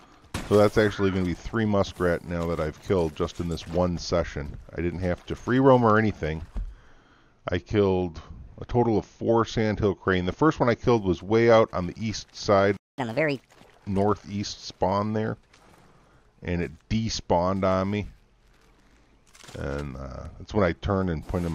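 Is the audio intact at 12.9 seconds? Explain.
No. At 12.9 seconds the sound has dropped out entirely, a playback stall of about 214 ms running from 12.77 to 12.98 s. It is likely that the player ran short of buffered data or its thread was held up, leaving the output silent until it recovered.

Right after, from 12.98 to 13.41 s, the audio rushes ahead at 1.5 times normal speed and sounds about seven semitones higher. This is catch-up at higher speed: the player resamples its backlog quickly to recover the lost time, then drops back to normal pace and pitch.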